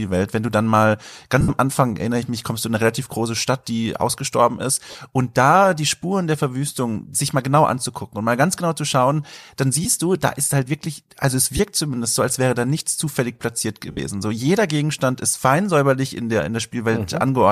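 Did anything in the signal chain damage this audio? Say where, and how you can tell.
Yes. Lost LE Audio frames on the Bluetooth link cause noisy smears at 1.41–1.51 s after "du dann mal", 4.91–4.95 s, 9.84–9.86 s, 11.57–11.60 s before "zumindest so als wäre", and 13.91–13.99 s. The decoder recycles the last spectrum with scrambled signs. Gaps of 15–75 ms fit whole 7.5 ms frames.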